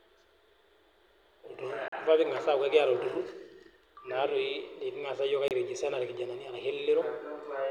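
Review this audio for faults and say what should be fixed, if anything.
Two short silent holes cut through the speech, at 1.88–1.94 s and at 5.48–5.52 s, most likely Bluetooth dropouts: packets reached the headphones too late and were discarded, so output stopped until good ones arrived. Speech resumes further along, as if it had kept playing, and the missing audio fits roughly three and two lost frames. A waveform shows flat gaps; a spectrogram shows thin full-height blank columns. Keeping the source close to the headphones and away from 2.4 GHz interference prevents this.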